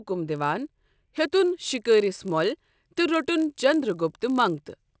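From 0.36 s to the end, the speech carries a 50 Hz buzz. The resampler restarted on every block. Each 20 ms block was converted from 44.1 kHz to 16 kHz in isolation. Every block edge therefore carries a small error, heard as a steady buzz wherever there is signal.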